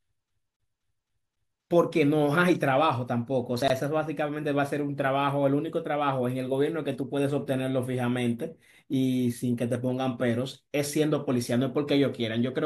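From 0.3 to 1.62 s the speech falls into the fast, regular stutter of a CD stuck on one turn. A scratch keeps knocking the laser back one track, so the same 0.26 s of audio plays five times, with a brief mute at every jump. Unlike a buffer underrun, where gaps come at uneven intervals and the sound moves on, this loop repeats identical material at a perfectly even rate before the speech carries on.

At 3.62 to 3.70 s there is a quick garbled flicker caused by chunks out of order. A 20 ms piece of audio arrived late and plays three chunks after its proper place, so it lands after the material that should follow it. Nothing is lost and nothing repeats, which separates it from a dropout or a loop. The out-of-place chunk creates three hard joins within a jumbled instant.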